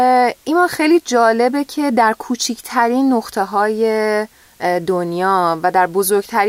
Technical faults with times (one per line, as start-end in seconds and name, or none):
none